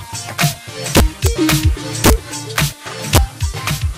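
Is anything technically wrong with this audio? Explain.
Yes. Integer overflow occurs at 0.42–0.44 s, 0.96–1.54 s, 2.04–2.13 s, 2.58 s and 3.15–3.18 s. Peaks exceeding the integer limit by about 1 to 4 dB wrap to the opposite sign rather than clipping, causing violent cracks. They show as sudden sign flips in the waveform and broadband vertical streaks on a spectrogram.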